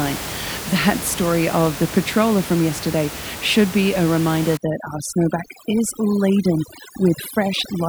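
Overdone noise removal starts at 4.57 s, after "should be a reminder", and runs to the end. An over-aggressive noise reducer shuts off frequency bands near its noise estimate, so the background drops and breaks up into twinkling specks. The voice loses its quieter parts.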